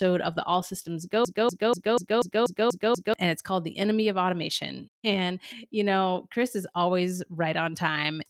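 A broken-record loop runs from 1.25 s to 3.14 s in this speech recording: a fragment about 0.24 s long plays eight times back to back, each repeat identical, before normal playback resumes. The likely cause is a stall in the player, encoder or stream, which kept re-sending the last fragment it held in place of new audio. Whatever speech belonged in those nearly two seconds is missing from the clip.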